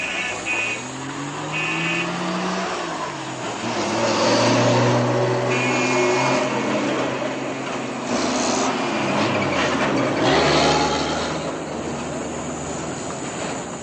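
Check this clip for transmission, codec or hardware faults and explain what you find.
Nothing stood out on listening to this sound; I heard no fault to report.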